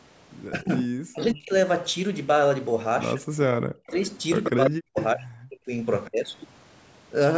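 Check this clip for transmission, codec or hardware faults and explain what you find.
Two call-path faults appear in the speech, both pointing to an echo canceller struggling with simultaneous talk.

Speech suppressed in double talk occurs at 0.5–1.53 s, 3.15–3.86 s, 4.49–5.72 s and 6.08–6.24 s. The likely cause is the canceller muting the near talker while the far side speaks. The voice dips or breaks off by up to about 40 dB (about 25 dB in the last case). On a waveform this shows as sudden collapses in the envelope, and on a spectrogram as vertical gaps in the harmonics.

Echo leak occurs at 3.87–4.07 s, 4.43–4.51 s, 4.96–5.04 s and 6.05–6.27 s. Uncancelled loudspeaker pickup is the likely source. It is heard as copies of the speech lagging 136 ms behind, between about 10 and 30 dB below the direct sound. On a spectrogram these appear as fainter, time-shifted repeats of the harmonic pattern.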